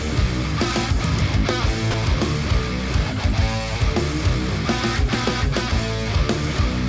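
From 1.91 to 1.94 s, about 30 ms of sound gives way to steady low-level noise, likely sound dropped by the voice detector, with comfort noise filling the gap. On a spectrogram it shows as a brief flat, featureless patch, below the 8 kHz ceiling the call path leaves on all the audio.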